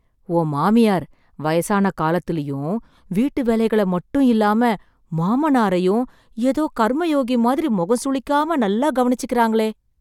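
No technical faults can be heard anywhere in this speech.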